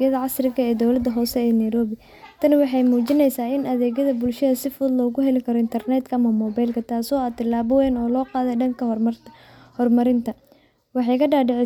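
No faults detected anywhere in the recording.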